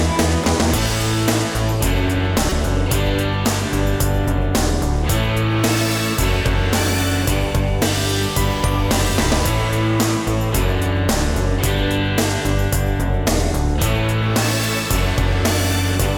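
Repeated buffer at 0.44 s and again from 2.50 to 2.52 s: late audio made the device replay a roughly 5 ms block, which fits a 256-sample buffer, once and then four more times, each with a hard join.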